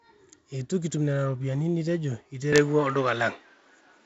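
Speech, carried over G.722 wideband coding with its top near 7.7 kHz and a light hiss, changes character at 2.53 s and stays changed to the end: the sound turns slightly duller, shifts in level by about 5 dB, and gains a faint new noise floor, with no gap at the change. This is likely an input switched to a poorer device. A waveform would show a step in amplitude there, and a spectrogram a new noise floor in the pauses.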